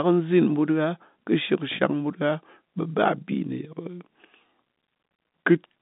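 No technical faults are audible.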